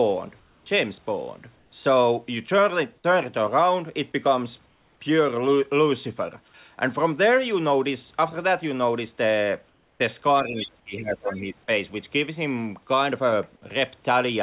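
At 0.40 to 0.66 s, 1.56 to 1.72 s, 4.66 to 5.00 s and 9.68 to 10.00 s, the pauses turn into a flat, featureless hiss about 2 to 3 dB quieter: comfort noise in place of the background, likely from discontinuous transmission. From 10.43 to 11.70 s the speech dips deeply. This is speech suppressed in double talk, likely an echo canceller ducking both talkers at once. Within that stretch, at 10.56 to 10.68 s, 11.03 to 11.10 s and 11.27 to 11.38 s, scraps of a second voice come through, faint in the middle one and clearly audible in the other two. This is the other side's voice leaking through, likely loudspeaker echo left in the microphone signal. Throughout, the narrowband call path cuts everything above 4 kHz.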